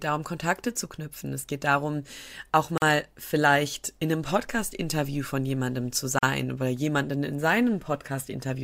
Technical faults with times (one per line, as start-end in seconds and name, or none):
2.78-2.82 gap at a join of encoded pieces
6.19-6.23 gap at a join of encoded pieces